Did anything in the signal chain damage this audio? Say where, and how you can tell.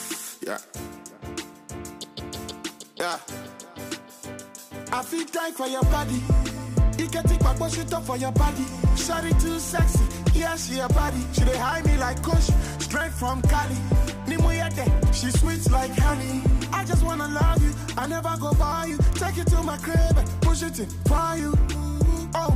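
Yes. From 8.06 to 12.44 s, crude rate conversion at the sample-rate stage adds a gritty, inharmonic fizz, about 25 dB down, tracking loud and high content. Nearest-sample picking, which fits a 48 to 44.1 kHz change, shows on a spectrogram as stray lines unrelated to the harmonics.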